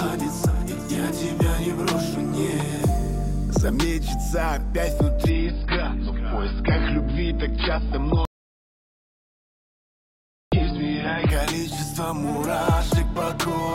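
At 5.30 s the quality falls off a cliff with no gap: everything above about 5.1 kHz vanishes, and the remaining sound gets that swirly, synthetic codec texture. That's an adaptive stream at a lower bitrate. The connection slowed, so the player switched to a much leaner version, and the sound fits AAC going from something like 96 kbit/s down to around 16 kbit/s. It holds until 11.30 s, when the full bandwidth snaps back just as suddenly.

Inside that degraded stretch, at 8.25 s, the audio cuts out to dead digital silence, with no room tone at all, and comes back mid-flow at 10.52 s. That's an audio dropout to silence lasting about 2.27 s. Whatever happened during that gap is simply gone, and it's likely the input was lost for a moment, through a link failing or a device dropping, while the recorder kept writing silence.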